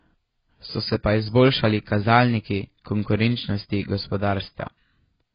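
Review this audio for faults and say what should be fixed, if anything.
Heavy AAC compression, likely AAC-LC at a very low bitrate near 16 kbps, runs throughout the speech. The encoder discards everything above 5 kHz and starves the remaining bands of bits, leaving the sound dull and smeared, with warbling vowels and fizzy sibilants. To prevent it, encode at a substantially higher bitrate or deliver from an uncompressed master.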